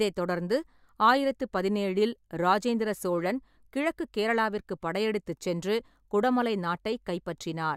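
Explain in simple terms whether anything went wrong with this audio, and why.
Nothing went wrong here: the speech comes through steady and intact, with no dropouts, glitches or distortion anywhere in the recording.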